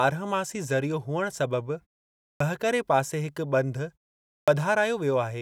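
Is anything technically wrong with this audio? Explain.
Yes. Clipped start after a pause at 2.34 s and 4.41 s: after silences of 0.56 s and 0.52 s, the output path sleeps and needs time to wake, so the first 64 ms and 66 ms of sound are lost. The speech bursts in abruptly, missing its onset, while the muted pauses themselves fall cleanly silent.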